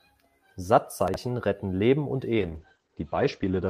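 In this speech clip, a 20 ms chunk of audio was delivered three chunks late, so between 1.08 and 1.16 s the pieces play in the wrong order. Nothing is missing, but the sound jumps back and forth in a brief jumbled stretch. This is chunks out of order. From 2.38 s to the end, the call bitrate drop squeezes the encoder from a full-rate setting down to what sounds like about 9 kbps, and the bandwidth narrows from 20 kHz to 8 kHz. The speech turns coarse, watery and muffled, and it never recovers before the clip ends.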